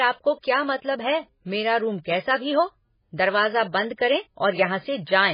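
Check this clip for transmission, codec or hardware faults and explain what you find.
One codec fault runs through the whole recording. The speech carries heavy MP3 compression artefacts from start to finish. Nothing is heard above 5 kHz. The cut-off and the heavy damage fit a very low bitrate, around 16 kbps. The likely cause is an MP3 encoder short of bits. It removed the treble at a fixed point and dropped weak frequency lines, which flicker between frames. The speech sounds dull, watery and swirly, and consonants lose their edges.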